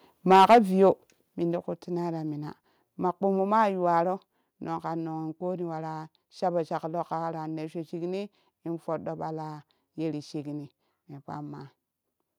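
From 0.3 to 0.89 s, just before "min ti kuttimai ra", the input was likely driven about 7 dB past the converter's ceiling, causing microphone overload. The loudest peaks are sliced flat, giving the syllables a harsh, crackly edge.

At 0.36 s and again at 1.35 s, the call software likely stepped the microphone volume down, first by about 2 dB and then by about 6 dB. Voice and background drop together in single abrupt steps, the larger one landing just before "min ti kuttimai ra".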